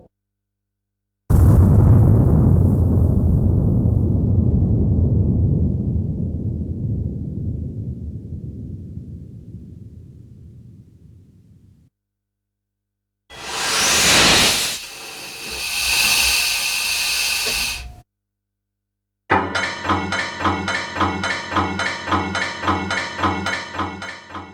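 No technical faults can be heard anywhere in the audio. Nothing breaks up, drops out or changes character at any point.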